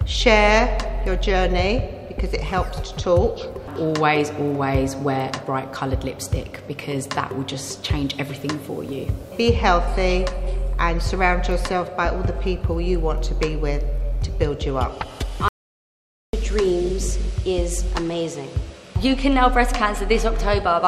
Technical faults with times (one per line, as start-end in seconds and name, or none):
15.48-16.33 audio dropout to silence